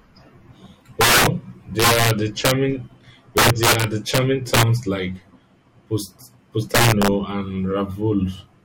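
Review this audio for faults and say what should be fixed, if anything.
Integer overflow at 1.01–1.27 s, 1.80–2.51 s, 3.37–4.18 s, 4.54–4.63 s and 6.75–7.08 s: the speech is driven roughly 4 to 10 dB past full scale, and every peak that exceeds the integer limit wraps around to the opposite extreme instead of being held there, producing harsh cracks far sharper than ordinary clipping. To prevent it, use saturating arithmetic or explicit clamping, or reduce gain before summing.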